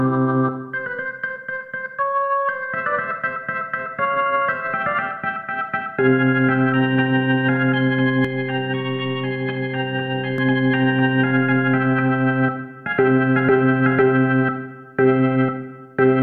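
Channel delay (comb filtering) runs from 8.25 to 10.38 s. One channel lags the other by about 10 ms, and the mono sum cancels at regularly spaced frequencies starting near 50 Hz and repeating every 100 Hz, leaving the sound hollow and phasey.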